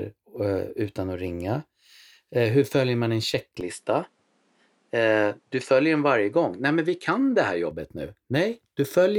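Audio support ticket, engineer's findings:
Input switched to a poorer device, 3.61 to 7.71 s. Speech band abruptly narrows: nothing above 11.4 kHz, so the sound turns duller, then full bandwidth returns at 7.71 s. No gap at either switch; level roughly unchanged. A fresh low noise floor appears, about 45 dB under the speech. Probable component: capture path. Mechanism likely an OS or app input change to a second mic with a narrower response and its own noise.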